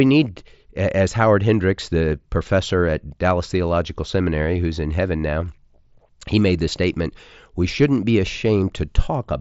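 No technical faults are present.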